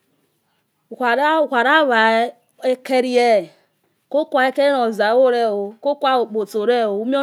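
Nothing in this speech recording stands out as a technical fault, so there's nothing here to flag.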